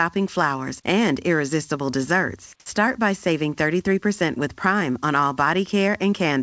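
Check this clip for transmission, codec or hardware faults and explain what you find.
One fault stands out, an onset clipped by the voice detector, heard through a wideband call path with nothing above 8 kHz, which fits G.722.

From 2.64 to 2.66 s, just after "flowers and irresistible desserts" and before "by saving", the next word jumps in abruptly, missing about 20 ms of its soft start. The likely cause is the sender's voice detector reacting late, so comfort noise filled that gap.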